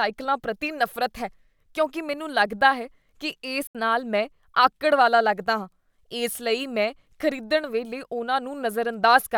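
At 3.67 s, after "ਮੈਨੂੰ ਲੱਗਦਾ ਹੈ ਕੀ", the speech cuts to silence until 3.75 s. This is likely a Bluetooth dropout. About 75 ms is skipped, and speech resumes at "ਨਾਲ ਮੈਂ ਆਕੜ ਵਾਲਾ".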